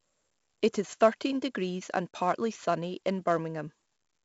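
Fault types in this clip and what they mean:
4-bit ADPCM compression: A gritty hiss rides on every loud stretch of the speech throughout, rising and falling with the level, and sharp onsets come out roughened and distorted. Nothing is heard above about 7.7 kHz, which gives a dulled top that fits a low sample rate, with the stream at 64 kbps. Each sample is coded as a small 4-bit step from a prediction, and the adaptive step size cannot keep up with sudden attacks, and the coding error here is heavy.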